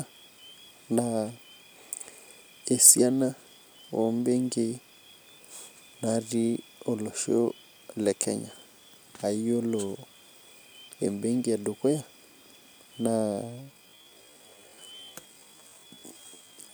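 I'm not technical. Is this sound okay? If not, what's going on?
No, not quite. From about 13.15 s right through to the end at 16.74 s, the speech suddenly drops to roughly half speed (0.51×) while the pitch stays the same. That's a time-stretched section: software likely stretched that last stretch to fill a set length, padding it out by repeating tiny slices of sound. That's why it drags, with an abrupt change of pace rather than a deeper voice.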